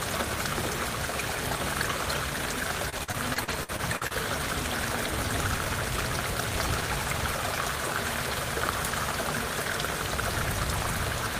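From 2.89 to 4.12 s the audio breaks up with repeated packet loss, giving a robotic, choppy sound. Ten separate gaps fall within that stretch, the longest 50 ms. Each is papered over by extending the preceding sound, so about a quarter of the span is concealment: roughly 300 ms of real audio is gone, replaced by 309 ms of filler, with only about 70 ms genuinely rebuilt. Unlike a single dropout, the holes recur close together, producing a stuttering rhythm rather than one clean break.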